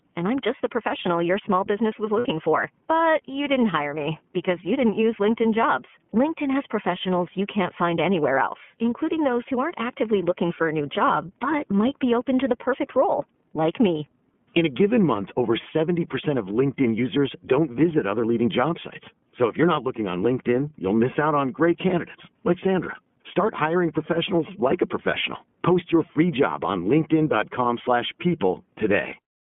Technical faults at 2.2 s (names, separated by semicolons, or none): iLBC codec; lost iLBC frames